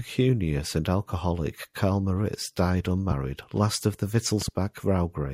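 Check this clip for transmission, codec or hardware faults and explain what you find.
Two loud pops appear in the speech. The likely cause is a sudden voltage step or pulse entering the signal path, such as a switch, plug contact or static discharge. The following circuitry shapes it into a short burst. At 3.11 to 3.14 s, just before "last of the", a single pop peaks around 15 dB above the speech. At 4.42 to 4.50 s, right after "last of the", a double pop reaches about 10 dB above it. The speech continues underneath both.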